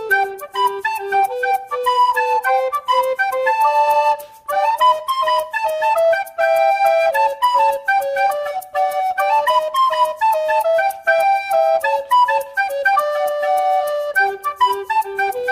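No technical faults are audible anywhere in the audio.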